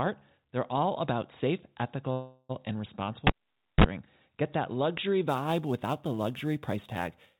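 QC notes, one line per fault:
2.12–2.51 s, call audio freeze: after "all about safe" the sound stretches into a fading buzz for 0.37 s, likely a drained jitter buffer; waveform shows smeared tail, nothing lost, later audio delayed.
3.27–3.84 s, cable pulled and plugged in: pop, near-silent dropout of 0.52 s, a 34 ms burst of 50 Hz mains buzz, then another pop; spectrogram shows vertical clicks and low harmonic lines.
5.29–7.40 s, sample clock jitter: after "that luxury" an unsteady converter clock (roughly 10 µs) adds a hiss about 25 dB below signal, brightest on loud, steep passages; broadband haze above strong formants, gone in pauses, within the call path's 4 kHz band limit.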